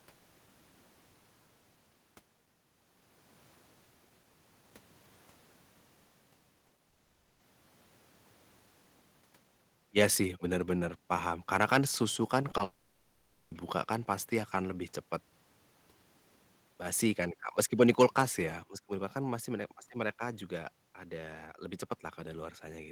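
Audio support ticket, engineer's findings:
Short concealed packet loss at 6.67, 6.77, 12.51 and 12.57 s. Brief smears of about 20 ms each. Receiver extrapolated the last sound across each gap before rejoining real audio.

Long network dropout, likely cause, at 6.89–7.41 s and 12.63–13.53 s. Each follows the paired short losses. Synthetic continuation fills the whole half-second and nearly 0.9 s stretches. The underlying audio is lost.

Microphone overload, likely cause, at 17.82–18.22 s. Peaks are about 4 dB past converter full scale, with a small fraction of samples flattened. This gives a harsh, crackly edge on the loudest syllables.

Microphone volume stepped down, likely cause, at 10.74 s (about 2 dB) and 18.63 s (about 5 dB). The level drops abruptly in one step. The second drop follows the clipped stretch, consistent with automatic input-gain correction.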